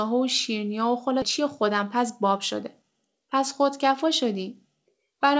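A speech recording carried over a WebRTC call path whose G.722 codec leaves nothing above 8 kHz, which shows on a spectrogram as a flat ceiling, with the usual coding noise. At 1.22 to 1.24 s there is a skip ahead. Around 0.7 s of speech never reaches playback, whether lost in transit or discarded by an overflowing jitter buffer. The two sides are spliced with no filler. The waveform shows an abrupt envelope change with no silent gap, and the spectrogram shows formant tracks that break and restart mid-pattern. The listener hears the talker lurch forward. From 1.39 to 4.05 s comes a jitter buffer speed-up. Having built up excess delay, likely after the late packets arrived together, the receiver repeatedly cut out pitch-period-sized pieces, about a fifth of a second in all. The speech runs at roughly 107% speed at unchanged pitch and sounds hurried. On a spectrogram, harmonic spacing stays constant while syllables are compressed in time, and the waveform shows small seams between pitch cycles.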